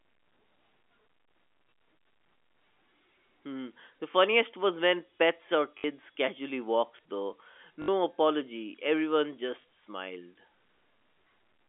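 A speech clip, heard through a telephone-band line, with packet loss and the last packet repeated: a small blip at 4.12 s (before "was when pets or"), short stutters at 5.78–5.84 s and 7.82–7.88 s (before "apology everyone"), and a blip at 9.62 s. Each lost stretch is filled by replaying the previous chunk, which fits 20 ms packets. The longer 60 ms gaps buzz at 50 Hz. On a waveform these show as copied blocks with step joins. A spectrogram shows repeated identical slices.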